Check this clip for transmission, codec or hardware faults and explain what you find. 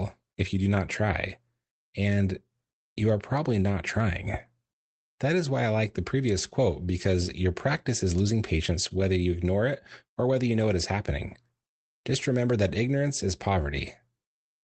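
Nothing here needs flagging; the speech comes through the WebRTC call path with its top end rolling off around 8 kHz, which fits a modest Opus setting, and that's just how a call like this sounds.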